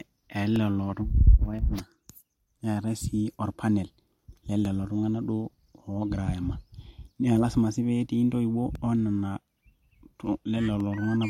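From 0.56 s to 10.80 s, periodic USB or driver dropouts recur every 1.024 s, about ten in all. Each time, roughly a millisecond of the speech is lost and replaced with silence as the audio path stalls, producing evenly spaced ticks while sound is present.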